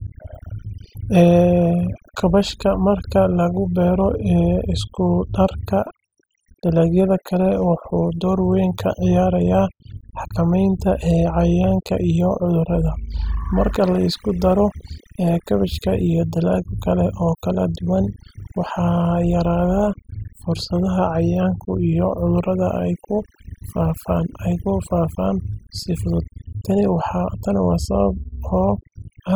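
A speech recording with overdone noise removal running the whole way through. The noise reduction was pushed too hard, so bands near its noise estimate get switched off along with quieter parts of the voice. That leaves near-silent gaps full of twinkly specks.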